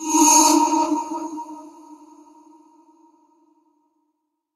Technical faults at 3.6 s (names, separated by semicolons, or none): noise suppressor applied to music or sounds